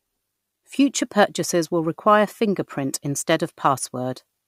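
From the very start to the end, the speech carries sample clock jitter: the converter's clock wanders by something like a microsecond and a half, so each sample lands a touch early or late. Fast-moving parts of the waveform suffer most, leaving an error roughly 35 dB under the signal. You hear it as a grainy hiss riding on louder, brighter sounds like sibilants, dropping away in the gaps between them.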